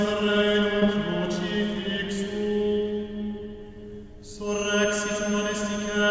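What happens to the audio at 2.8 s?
Nothing goes wrong at 2.8 s: the music plays through intact there, with no dropout, click or glitch at that point.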